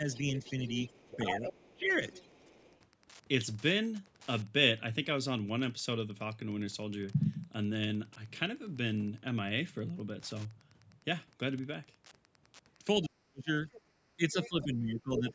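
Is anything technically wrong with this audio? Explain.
Yes, there are three faults. Wi-Fi interference runs throughout: a faint ticking about 30 dB below the speech, repeating every 102.4 ms. A nearby radio's beacon is being rectified by the audio circuit.

Speech suppressed in double talk: the speech dips slightly at 0.00–0.04 s, drops deeply (about 30 dB) in pieces from 0.89 to 2.12 s, and fades by about 40 dB from 13.03 s to the end. This likely comes from the echo canceller turning everything down while both sides talk.

Other side's voice leaking through: a second voice sits about 10 dB below the speech from 0.13 to 2.79 s, and about 5 dB below from 13.72 to 15.32 s. It is likely loudspeaker echo the canceller did not fully remove.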